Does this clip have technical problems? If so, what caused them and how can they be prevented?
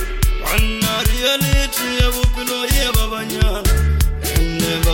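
Yes. Crude rate conversion runs from 3.03 s to the end. Samples were linearly interpolated with no anti-aliasing filter, which fits a 48 kHz to 44.1 kHz change, leaving a gritty, inharmonic fizz roughly 30 dB below the sound that follows its loud, bright parts. Using a properly filtered, band-limited resampler prevents this.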